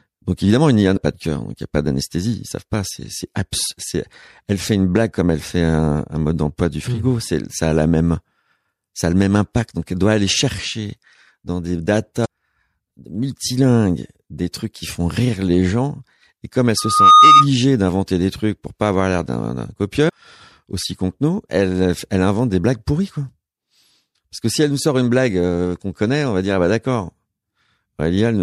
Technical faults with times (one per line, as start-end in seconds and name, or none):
0.93-0.97 damaged data in a compressed stream
12.21-12.26 damaged data in a compressed stream
16.77-17.47 loudspeaker feedback squeal
20.05-20.10 damaged data in a compressed stream